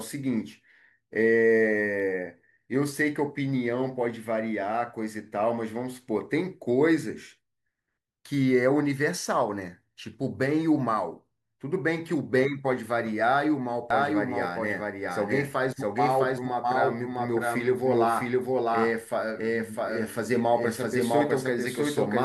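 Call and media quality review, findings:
Doubled audio track, 13.90 s to end: about equally loud copy trails roughly 0.7 s, starts abruptly; likely slower second capture path.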